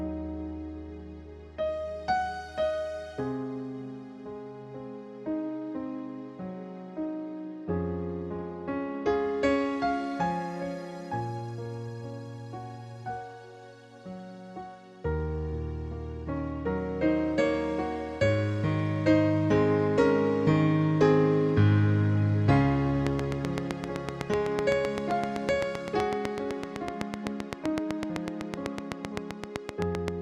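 From 23.07 s to 30.09 s a train of clicks runs over the sound, about fifty in all, spaced regularly at 7.84 per second. Each click has much the same sharp shape and peaks around 20 dB above the signal, so the ticking stands out clearly and carries on through quieter moments. The likely cause is an external pulse source such as nearby equipment or a faulty connection or power supply. The steady rate and similar shape tell it apart from random crackle.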